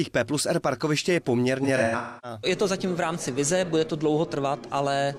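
From 1.63 s to 2.38 s there is AAC frame loss with concealment: roughly 430 ms of audio missing, scattered across about 600 ms, which fits around ten lost frames. The decoder rebuilt each gap from the last good spectrum, giving smeared, noisy, phasey patches. The longest run is around 300 ms.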